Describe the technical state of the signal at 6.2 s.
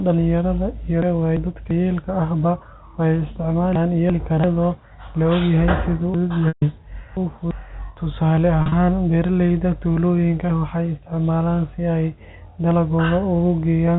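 At 6.2 s the speech sounds jumbled from 6.14 to 7.51 s. This is chunks out of order: a 341 ms chunk arrived three chunks late and plays after those meant to follow it, leaving three hard joins.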